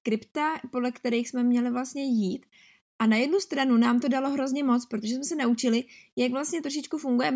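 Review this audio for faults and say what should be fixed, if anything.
Nothing in the speech needs fixing, since the signal holds steady throughout with nothing in its level, timing or frequency content that calls for repair.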